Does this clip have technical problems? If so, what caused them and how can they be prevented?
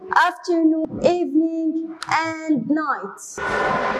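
Yes. There is damaged data in a compressed stream, heard as two short glitches. The first is a very brief blip at 0.85 s. The second is longer, from 3.34 to 3.38 s. At each point, some bytes in the encoded stream were corrupted or lost. The decoder misread those frames, lost sync, and had to search for the next valid frame header. To prevent it, transfer and store files with checksums, and use error-checked connections for streaming.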